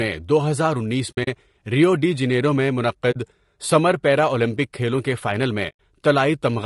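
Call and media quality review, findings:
Low-delay AAC compression: grainy, rough speech throughout with noise between harmonics, plainly audible. Likely AAC-ELD; the damage fits roughly 32 kbps, with short frames smearing pitch detail.

AAC frame loss with muting: soft-faded dropouts at 1.11–1.28 s after "دو ہزار انیس" (scattered gaps, longest about 70 ms), 3.11–3.16 s, and 5.69–5.74 s. The decoder zeroed the lost frames, which fits 20 ms frames.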